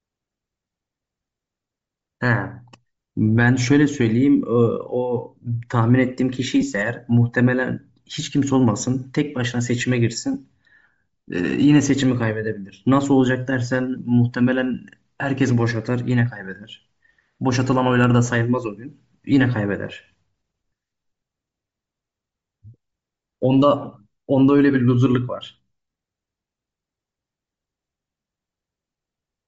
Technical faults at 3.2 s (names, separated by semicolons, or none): Bluetooth LC3 compression